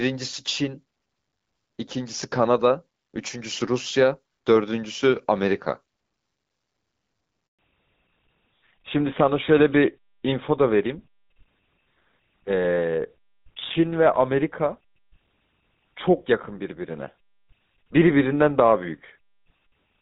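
At 7.47 s the speech fades out for a handover gap of 120 ms, lasting until 7.59 s. While the call was passed from one network to another, no speech frames got through. The audio falls away within a few tens of milliseconds and then stays silent until the new link carries sound again. On a waveform this appears as a short flat line cutting into the speech. On a spectrogram it is a clean vertical blank running across every frequency.

From 7.59 s to the end there is a fallback to narrowband. Up to the gap, the speech has the fuller HD Voice sound, with light coding texture that fits AMR wideband at 12.65 kbit/s. After the gap, nothing remains above 4 kHz. The voice turns duller and rougher, with the grainy edge that points to the GSM full-rate codec at 13 kbit/s. On a spectrogram, energy that reached about 7 kHz before 7.59 s is cut off abruptly at 4 kHz, a hard horizontal ceiling held for the rest of the clip.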